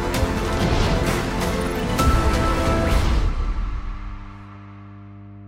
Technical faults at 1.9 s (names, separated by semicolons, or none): mains hum